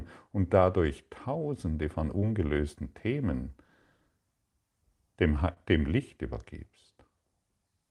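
Short concealed packet loss hits this speech clip twice, at 2.19 to 2.22 s and 5.53 to 5.57 s. Roughly 20 ms and 30 ms of audio arrived too late, so the receiver extended the preceding sound and crossfaded back, leaving brief smears. The call path itself shows a top end cut near 12 kHz, which fits a super-wideband Opus call setting.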